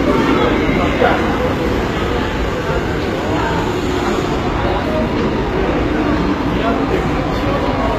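Throughout, the top end sounds bright but gritty and metallic, and nothing is present above about 14.9 kHz. That points to likely HE-AAC compression at roughly 20 kbps, rebuilding treble from copied lower bands. Unlike plain low-pass dulling, the highs stay present but mismatched.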